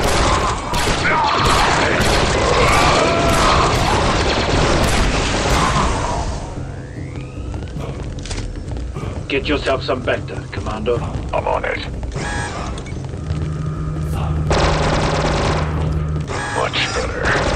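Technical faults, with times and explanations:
No technical faults can be heard in this recording.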